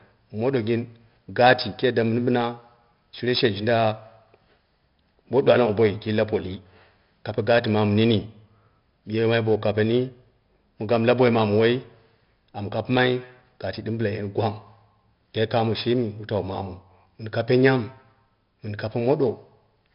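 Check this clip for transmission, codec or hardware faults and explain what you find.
One codec fault runs through the whole recording. 4-bit ADPCM compression is present from start to finish. Each sample is coded as a coarse 4-bit step from a predicted value, with a step size that adapts as it goes, so the error is a gritty hiss that rides on the speech and grows with its level. Sharp onsets smear into distortion where the step cannot grow fast enough. The damage is heavy. Nothing above 5.3 kHz survives, which dulls the speech and fits a low sample rate at around 44 kbps.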